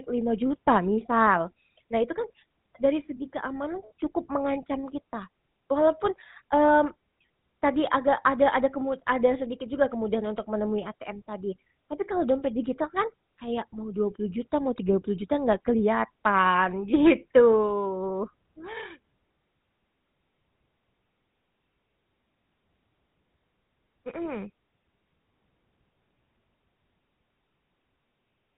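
A speech recording with a buzzy, gravelly roughness and nothing above 4 kHz throughout, from the GSM full-rate codec, whose pulse-driven vocal-tract model suggests about 13 kbps.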